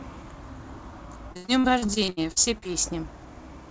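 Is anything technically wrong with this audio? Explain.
Yes. From 1.32 to 2.72 s the call suffered repeated packet loss, giving a robotic sound. Audio packets went missing or arrived too late about sixteen times in quick succession, about 500 ms in all, the longest hole 73 ms. Each time the receiver filled the hole by extending the last sound it had, so roughly a third of that stretch is patched-in audio. The result is choppy, robotic speech with fragments dropped, heard against a band that stops at 8 kHz, which fits a wideband call codec such as G.722.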